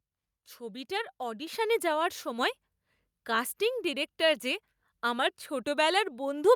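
At 1.47 s the microphone volume steps up by about 6 dB in one jump, as the call software boosts input gain, so voice and background suddenly get louder together.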